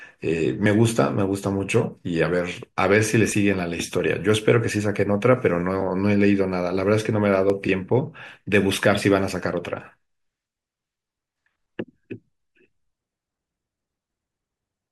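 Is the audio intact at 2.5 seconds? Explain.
No. At 2.52 s a small jump forward in the speech is heard, likely a dropped buffer (overrun) that skipped about 20 ms of audio.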